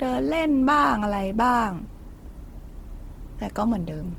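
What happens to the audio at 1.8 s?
The speech at 1.8 s, like the whole clip, carries plainly audible Opus compression damage: it sounds rough, grainy and noisy rather than clean. The likely cause is the codec's music (CELT) mode running short of bits, which fits a low rate near 16 kbps. It keeps each band's energy but fills the detail with folded or noise-like content. A spectrogram shows fuzzy, smeared texture in the upper bands instead of crisp harmonics, with content still reaching about 20.2 kHz.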